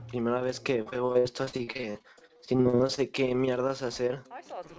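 From 0.82 to 2.99 s there's repeated packet loss with a choppy sound and pieces missing: a couple of dozen short holes, the longest 60 ms, each patched by stretching the previous sound, so about a third of that stretch is concealment, all within the call path's 8 kHz band.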